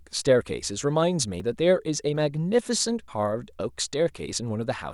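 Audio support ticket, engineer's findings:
A jump in the speech at 1.4 s, 2.16 s and 3.08 s. Likely dropped buffer (overrun) on capture: samples were overwritten before being read, so the sides splice directly. Loss is about 40 ms at the first two, about 70 ms at the third. No silent gap, unlike an underrun dropout. The speech skips ahead instead.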